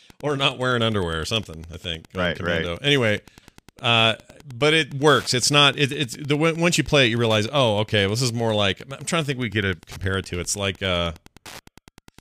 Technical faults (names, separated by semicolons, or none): Wi-Fi interference